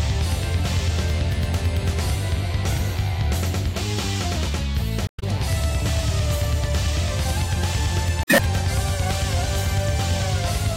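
At 5.06–5.24 s and again at 8.22–8.40 s there's damaged data in the compressed stream: the decoder loses sync, spitting out a short chirp, squawk, click or hole.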